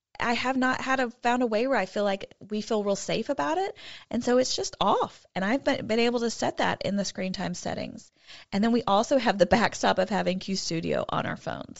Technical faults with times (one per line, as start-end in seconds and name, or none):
0.00-11.79 Bluetooth LC3 compression